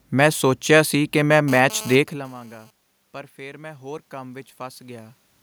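From 1.48 s to 2.71 s, just after "ਮੈਂ ਸੋਚਿਆ ਸੀ ਕਿ", a hard, raspy buzz with a dense stack of harmonics sits under the speech, cutting in and out rather than holding steady, at about 17 dB below the voice. This is GSM phone buzz. A nearby 2G phone moving data sends radio bursts at 217 Hz, and the audio circuitry rectifies them into an audible tone unrelated to the talker. The talker shifting position around 2.0 s is a separate, natural level change.

From 3.37 s to 5.2 s, the speech and the room noise behind it swell together, slowly gaining about 4 dB over nearly two seconds. This is automatic gain rising. The input had fallen by about 21 dB, so the gain control judged the signal too quiet and gradually raised its gain. Because it amplifies everything reaching the microphone, the background climbs along with the voice.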